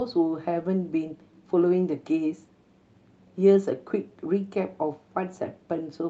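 Speech recording with no technical faults detected anywhere in the clip.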